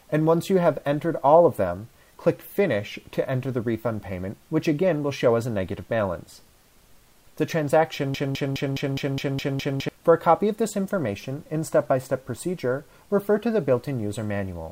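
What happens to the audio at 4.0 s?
Nothing goes wrong at 4.0 s; the audio plays through that moment intact, with no audible fault.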